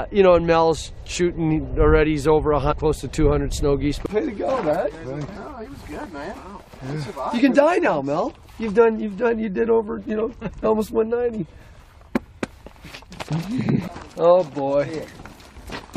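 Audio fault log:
2.71–2.73 s and 5.35 s, damaged data in a compressed stream: two brief blips, each around 20 ms, where corrupted frames are misread before the decoder resynchronises on the next frame header.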